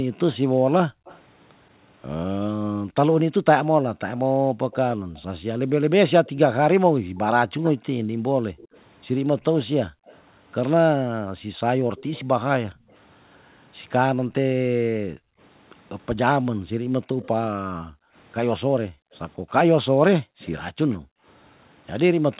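From 0.09 to 1.05 s the room background dips by up to about 40 dB for roughly half a second: background gated by the echo canceller, which pulls the microphone down hard while the far-end loudspeaker plays. At 1.05 to 1.2 s a faint repeat of the speech trails about 180 ms behind, about 25 dB down. This echo leak is likely residual loudspeaker pickup the canceller failed to remove. Gating returns from 2.82 to 5.16 s, and the echo recurs from 4.17 to 10.19 s. A long gated stretch from 7.0 to 21.26 s drops the background for about four seconds in all. Further echo appears at 11.97 to 12.95 s, at 17.22 s, and from 19.49 to 20.96 s, the last about 30 dB down. Its delay creeps from 186 to 199 ms.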